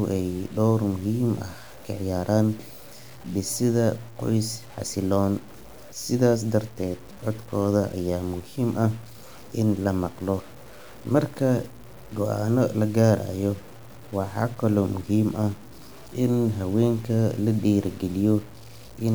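The likely cause is low bit depth without dither. Across the whole speech clip the samples seem to have been cut down to very few levels by plain truncation, with no noise added to smooth the rounding. The grain fits about a 7-bit word. Because the error tracks the signal, it sits around 25 dB below the speech as a gritty, shifting distortion. Quiet syllables and decaying endings sound roughest, sputtering or dropping abruptly to silence.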